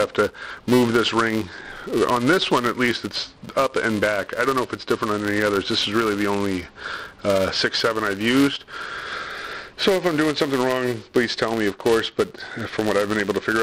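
Filter restarted on every block, throughout: each block's fresh-start transient produces a level-following 375 Hz buzz, which fits a 128-sample block.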